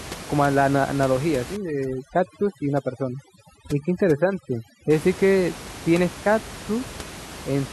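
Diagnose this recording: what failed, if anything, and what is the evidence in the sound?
Overdone noise removal in the call-processing stage runs from 1.56 to 4.90 s. The suppressor acts too hard against room noise about 15 dB below the speech. Any band near its noise estimate is cut, taking quieter speech detail with it. The background drops and breaks up into twinkling specks. On a spectrogram the floor goes dark with isolated flickering dots, and weaker harmonics show ragged gaps.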